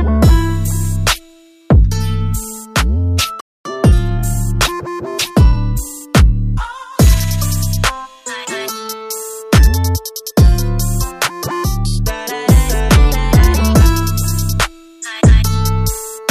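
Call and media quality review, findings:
Playback stall, 3.40–3.65 s: output drops to silence for about 250 ms mid-flow, then resumes. Likely player buffer underrun or blocked playback thread.

Time-compressed catch-up, 3.65–6.13 s: audio runs 1.1x fast at normal pitch. Player cross-fades out small segments to drain backlog.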